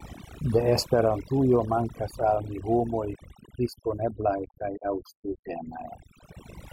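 Throughout the speech, overdone noise removal strips the background to near silence scattered with twinkling specks. Unlike a noise gate, which mutes everything at once, the over-strong reduction switches individual frequency bands off, taking quiet parts of the voice along.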